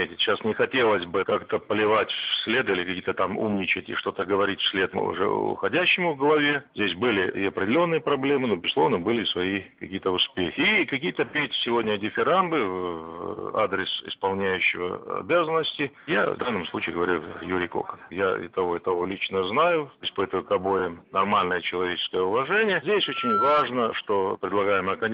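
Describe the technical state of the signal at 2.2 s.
At 2.2 s there are repeated frames, from 2.16 to 2.26 s: a 52.2 ms block of compressed audio plays twice more, heard as a quick stutter. Unlike a dropout, nothing is lost. The signal simply runs 104.5 ms longer, which fits two codec frames being resent.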